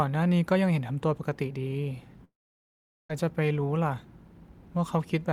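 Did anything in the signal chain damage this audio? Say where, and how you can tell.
Yes, the network stage looks to be at fault: a long network dropout in the speech from 2.24 to 3.10 s. At 2.24 s the last sound carries on as a buzzy tail that fades away, then it's basically silence for about 0.78 s before the audio picks back up at 3.10 s, with that stretch gone. That's the receiver papering over roughly 850 ms of audio that likely never arrived, most likely lost packets, then giving up and going quiet.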